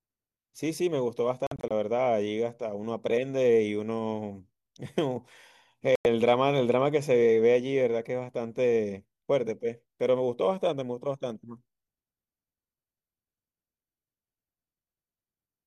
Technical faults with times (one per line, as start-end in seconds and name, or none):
1.47-1.71 digital broadcast dropout
5.95-6.06 digital broadcast dropout